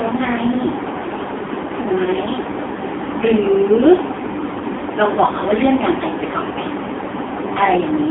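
Throughout, the speech sounds buzzy, synthetic and boxed in, with nothing below about 250 Hz or above 3.6 kHz. This is heavy AMR narrowband mobile codec damage, consistent with a low rate near 5.9 kbps.

At 2.04 to 2.09 s and again at 4.78 to 4.82 s, the sound briefly dips and warbles. These are lost AMR speech frames: each time, one 20 ms frame failed, and the decoder filled the gap with fading repeats of its previous settings.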